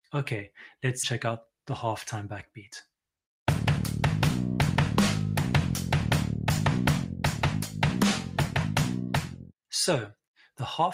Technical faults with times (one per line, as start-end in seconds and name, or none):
8.23-8.38 sound cut by the noise suppressor
9.22-9.53 sound cut by the noise suppressor